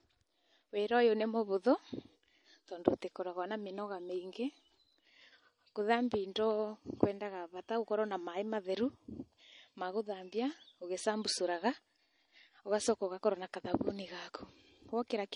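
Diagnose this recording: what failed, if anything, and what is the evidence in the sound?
The fault sits at the codec stage and runs through the whole speech clip: low-bitrate audio saved at a high bitrate. From start to finish the speech has the thin, smeared, watery quality of a heavily compressed MP3, which points to a first encode around 40 kbit/s, even though the file itself suggests about 256 kbit/s. This is likely a re-encode. The second MP3 pass spent its larger budget faithfully preserving damage the first pass had already done, and could not restore what was discarded.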